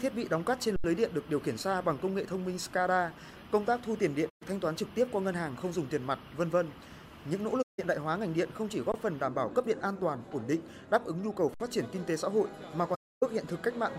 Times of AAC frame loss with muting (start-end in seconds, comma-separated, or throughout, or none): 4.29-4.43, 7.62-7.79, 12.94-13.23